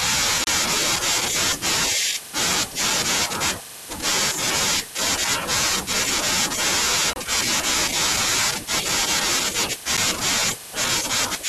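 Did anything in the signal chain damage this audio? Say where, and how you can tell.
Yes, at the driver or buffer stage: blocks of digital silence at 0.44 to 0.47 s (30 ms), 7.13 to 7.16 s (27 ms) and a 10 ms tick at 9.97 s. Output underran and was zero-filled. Hard edges click, unlike a faded or concealed network dropout.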